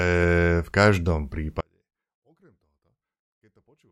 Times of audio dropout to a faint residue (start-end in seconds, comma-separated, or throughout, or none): 1.61-3.91